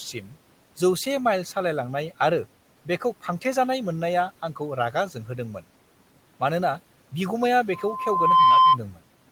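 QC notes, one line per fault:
0.13–0.34 s: speech cut by the noise suppressor. The opening sound dips by about 9 dB for around 150 ms and sounds swallowed. The suppressor mistook these soft, low-level speech sounds for background and pulled them down with it.
7.72–8.78 s: loudspeaker feedback squeal. Right after "मानोना बिगुमाया", a steady 1 kHz tone swells over roughly three quarters of a second to about 10 dB above the speech. The microphone is hearing its own loudspeaker, and the loop gain exceeds one at that frequency.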